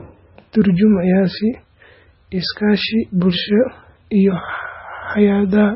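MP3 compression runs through the whole speech clip. Nothing is present above 5.6 kHz, so the sibilants sound dull, and the rest of the band has a heavily watery, swirling texture with smeared consonant onsets. The likely cause is an MP3 encoder starved of bits, consistent with a bitrate near 17 kbps, that cut the treble at a fixed point and let weak frequency lines drop in and out from frame to frame.

Video or display buzz enters at 4.26 s and continues to the end. A screen or video cable has coupled into the audio path, adding a hum-like buzz at about 60 Hz (matching a 59.94 Hz field rate) with a layer of hash above it, plus a thin, very high whine at 15.7 kHz, the line rate. It sits faint, roughly 40 dB below the speech.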